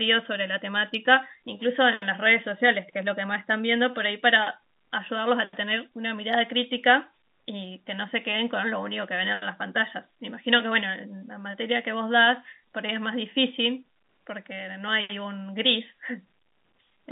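No faults can be heard anywhere in this speech.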